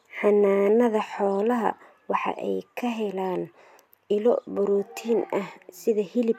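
No technical faults turn up anywhere in this recording, so there's nothing here to flag.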